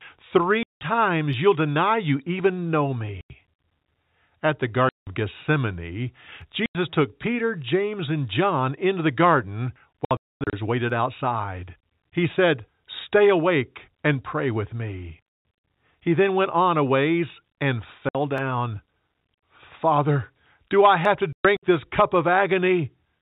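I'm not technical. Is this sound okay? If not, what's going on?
No. The speech has two separate problems.

The main one is packet loss filled with silence. The recording was sent in small chunks, and some chunks never arrived, so the receiver put dead silence in their place. Each gap starts and stops abruptly. The gaps come at 0.63, 3.21 (right after "deny you even know"), 4.89, 6.66, 15.30 and 18.09 seconds. There are scattered runs from 10.05 to 10.53 and from 21.33 to 21.63 (just before "this cup"). Gap lengths fit chunks of 30 milliseconds.

The second is dropped samples. A tiny sliver of the recording, just under a millisecond, goes missing, so the sound jumps and makes one sharp tick with nothing audibly lost. It happens at 1.33, 6.42, 10.90, 18.38, and 21.05 (just after "do I") seconds. The likely cause is the audio stream briefly skipping data somewhere in the chain.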